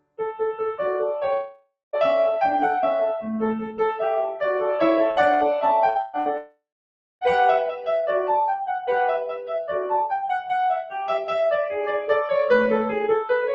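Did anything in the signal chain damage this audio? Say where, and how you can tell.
Yes. At the call-processing stage, the opening 0.2 s of the music is pulled down by up to about 21 dB. This is sound cut by the noise suppressor. It mistook the start of the music for background noise and attenuated it.

In the network stage, the audio stops arriving at 1.33 to 1.96 s and at 6.37 to 7.24 s. Each time, the last sound is stretched into a fading buzz and then drops to silence. The silence lasts about 0.2 s in the first gap and about 0.6 s in the second. The music resumes further on, with the lost part gone. A long network dropout is the likely cause.

Shorter gaps fall at 5.11, 5.34, 5.89, 6.01 and 6.19 s. Most last about 60 ms. The one at 6.01 s lasts 120 ms. These are bursts of packet loss. The receiver filled each gap by extending and fading the previous sound, then skipped ahead past the missing audio.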